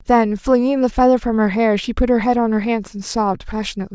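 No audible technical faults occur anywhere in the recording.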